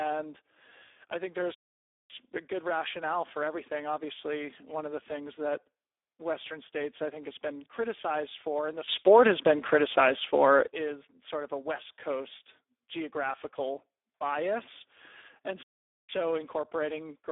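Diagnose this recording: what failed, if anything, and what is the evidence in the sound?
The failure is at the codec stage: the speech has been through the Speex codec at a heavily damaging setting, for the whole clip. With so few bits left for the excitation, the voice sounds hoarse, noisy and edging toward robotic, which fits a low-rate mode around 8 kbps. The band sits roughly between 300 Hz and 3.6 kHz. On a spectrogram, harmonics look smeared and grainy, and above about 3.8 kHz there is nothing at all.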